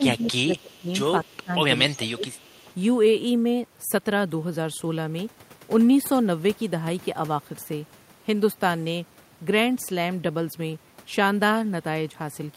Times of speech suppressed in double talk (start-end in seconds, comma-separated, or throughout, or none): 0.00-0.89, 1.28-1.53, 1.80-2.30